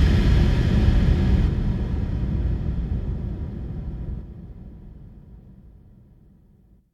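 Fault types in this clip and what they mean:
Damaged data in a compressed stream: corrupted bytes in the encoded file make the decoder misread frames and lose sync while it hunts for the next valid frame header. Here it gives two short blips, at 1.47 s and from 6.78 to 6.81 s.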